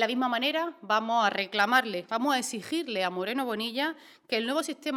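Nothing in the audio stood out as a technical problem on listening.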